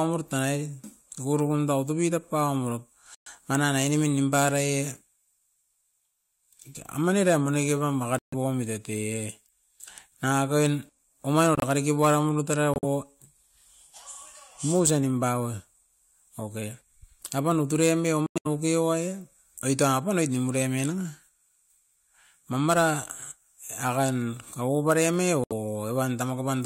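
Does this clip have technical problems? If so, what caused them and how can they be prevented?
Yes. The first fault is corrupt frame muted: flipped bits made the decoder reject frames, and the player substituted silence. This leaves abrupt holes at 3.15–3.28 s (just before "mana na"), 8.19–8.34 s, 11.55–11.64 s, 12.74–12.86 s, 18.26–18.47 s (right after "apan o turemi") and 25.44–25.52 s. Each lasts roughly 0.09 to 0.2 s, which fits three to eight lost frames.

The second fault is corrupt frame decoded: a damaged frame was played anyway, so misread gains put energy at the wrong frequencies. The result is a short glitch at 20.59–20.62 s, just after "oit tapu noit", peaking around −20 dBFS.

Error-checked storage and transport, with forward error correction or retransmission on lossy links, would keep frames from arriving corrupted.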